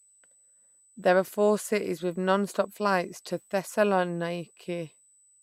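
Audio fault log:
Throughout — USB whine: a thin, steady high-pitched tone at 8 kHz sits under the speech, about 35 dB below it. The fixed pitch matches the bus's 125-microsecond microframe rate, with current drawn each microframe leaking into the audio through shared power or ground.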